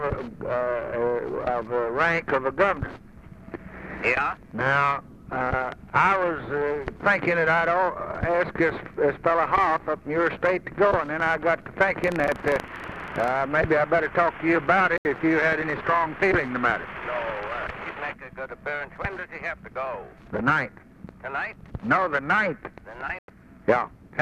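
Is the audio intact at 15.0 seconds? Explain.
No. A digital broadcast dropout mutes the sound from 14.98 to 15.06 s. The receiver lost frames and went silent, so about 72 ms is missing.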